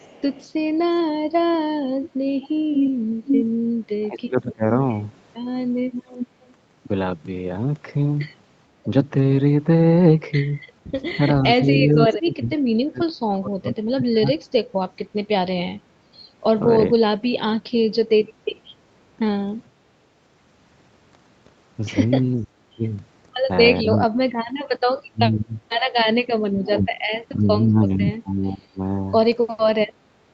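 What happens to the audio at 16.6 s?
At 16.6 s the speech carries on intact, with nothing going wrong beyond the normal bass trimming of call microphone processing.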